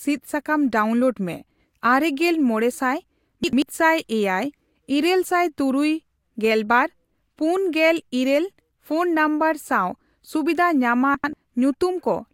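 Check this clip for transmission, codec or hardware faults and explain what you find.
Two faults, both chunks out of order, at 3.44–3.62 s and 11.15–11.33 s: a 93 ms chunk plays one place late, jumbling the speech at three hard joins.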